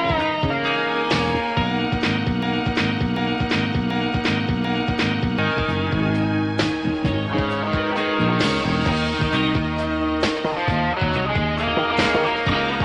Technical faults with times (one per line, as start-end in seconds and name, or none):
2.42-5.38 broken-record loop